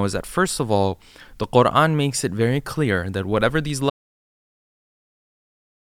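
Audio dropout to silence at 3.90 s in this speech clip, right after "clear that whatever these": the signal goes to silence, with no room tone, through the end. The input was likely lost, and the recorder kept writing silence.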